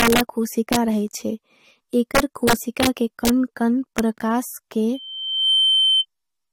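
A gain or mixing stage in this speech recording lets its integer sum run past the largest representable value, and instead of being limited the samples wrap round to the opposite sign. Peaks pushed only about 0 to 2 dB over the limit flip across the full range, giving harsh cracks far sharper than clipping at 0.00–0.21 s, 0.73–0.76 s, 2.15–2.87 s, 3.25–3.30 s and 3.99 s, with the longest run around 2.2–2.9 s. Later, a loudspeaker feedback squeal appears when a microphone picks up the loudspeaker it feeds, so the loop gain exceeds one at a single frequency. A 3.1 kHz tone swells over about half a second from 4.94 s and holds at roughly 5 dB above the speech until it stops at 6.06 s.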